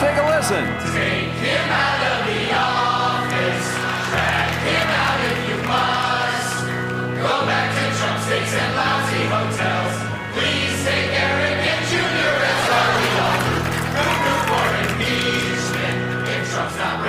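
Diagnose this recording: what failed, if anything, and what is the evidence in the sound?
What failed is a call bitrate drop at the codec stage, driven by the network's bandwidth estimate. From 11.92 s to the end, the sound turns rougher and more muffled as the top end gets trimmed and the coding coarsens. The worst stretch lasts about 1.1 s. That fits the encoder being squeezed from roughly 96 kbps down to about 17 kbps, and it doesn't climb back before the clip ends.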